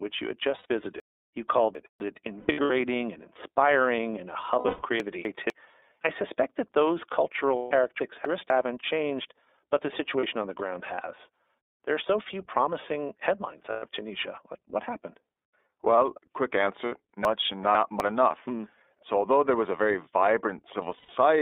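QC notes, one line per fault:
Throughout, iLBC codec: the whole signal passed through a narrowband VoIP codec that codes each frame on its own, with a sound that fits 30 ms frames near 13.3 kbps. Only about 300 Hz to 3.6 kHz survives, so the speech sounds thin, muffled and plainly rough and synthetic.
0.57 to 0.66 s, 2.4 to 2.71 s, 4.59 to 4.83 s, 7.56 to 7.71 s, 10.2 to 10.24 s, 13.7 to 13.86 s, 16.85 to 16.92 s, 20.97 to 21.1 s, lost iLBC frames: packets went missing and the decoder filled the gaps by repeating the last pitch cycle with added noise. Each gap sounds like a held, buzzy or breathy vowel, from 30 ms up to 210 ms, and at 2.4 s and 4.59 s the dropouts are scattered in bursts. Because each frame decodes on its own, the voice recovers almost at once.
1.0 to 2.0 s, 5.0 to 5.5 s, 8.0 to 8.5 s, 17.25 to 18.0 s, chunks out of order: a 250 ms block of audio arrived or was written late and plays one to three blocks after its proper place. 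Nothing is missing, but the sequence jumbles, with three hard joins at the splices.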